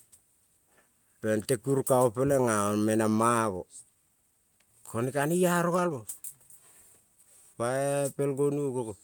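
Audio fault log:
3.85–3.87 s, skip ahead: the speech jumps forward here with no gap at all, and about a second of it is simply gone. Later audio was already queued, so the receiver threw away the stretch in between and joined the two sides almost directly, cutting latency by about a second. The splice is abrupt, and whatever was being said just breaks off mid-flow before picking up somewhere further on.
3.95–6.50 s and 7.00–7.84 s, jitter buffer speed-up: right after the jump the buffer is still holding more than it wants, so it trims tiny pitch-period-sized slices again and again. The first run plays at 113% speed and removes around a third of a second. The second runs at 110% and drops roughly a tenth. Pitch stays put, but the talker sounds noticeably rushed, as if hurrying through both stretches.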